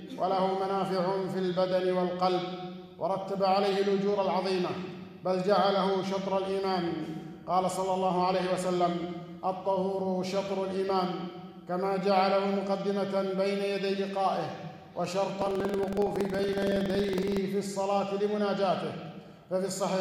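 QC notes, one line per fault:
15.37–17.37 s, buffer tearing: the writing program and the playback hardware have slipped against each other, so in every buffer a small slice, around a twentieth, replays audio from roughly a fifth of a second earlier, with hard joins on each side. That gives a rattling buzz at about 21.5 Hz, which fits a 2048-sample buffer. On a waveform, evenly spaced discontinuities appear; a spectrogram shows regular vertical striping at that rate wherever signal is present.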